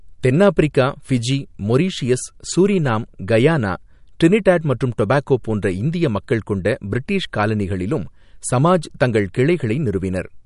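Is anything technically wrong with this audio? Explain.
Yes, the whole clip carries plainly audible codec damage. Nothing comes through above 11.2 kHz, and the speech sounds watery and swirly, with chirpy s sounds. That's likely MP3 compression at a starved bitrate, around 48 kbps: the encoder chops the treble and lets weak frequency lines blink on and off between frames.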